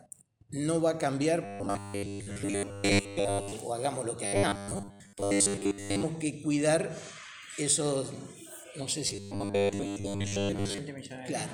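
From 1.45 to 3.53 s, 4.26 to 6.03 s and 9.07 to 10.78 s, the sound turns into a rigid, metallic buzz pinned at 100 Hz, still loosely tracking the audio's contour. This is robotic sound from repeated short buffers, likely caused by audio arriving too slowly. Playback fills the gaps by looping a 10 ms slice, whose period sets that fixed 100 Hz pitch, while most of the real material in those stretches is skipped.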